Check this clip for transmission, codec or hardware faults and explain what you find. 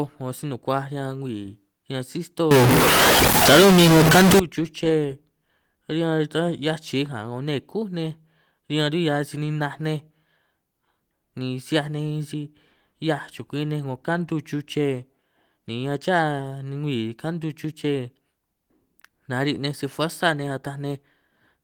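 One hardware fault is present: a stuck bit from 2.51 to 4.39 s. During that span quiet moments fill with noise. The likely cause is one data bit held at a fixed value by a broken line or converter. Roughly half the samples are then shifted by that bit's weight in a pattern that follows the waveform, and the bit also flips with the sign of small values, which is why low-level passages turn into noise. On a waveform the trace looks stepped and jagged, with an offset near zero crossings. A spectrogram shows broadband noise spread across the full band for those two seconds, most visible in the gaps. The Opus voice compression runs in hybrid mode at 24 kbps, and its content reaches up to about 20 kHz.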